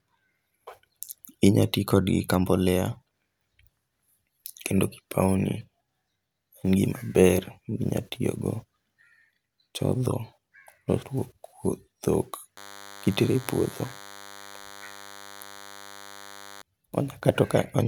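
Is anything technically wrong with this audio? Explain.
Yes. From 12.57 s to 16.62 s the speech carries a DECT cordless phone buzz. A nearby DECT handset or base transmits a short radio burst every 10 ms, and the audio circuitry rectifies it, so a thin, steady buzz at 100 Hz sits roughly 20 dB below the speech. On a spectrogram it appears as a ladder of evenly spaced horizontal lines at 100 Hz and its many harmonics, and a zoomed waveform shows regular spikes every 10 ms.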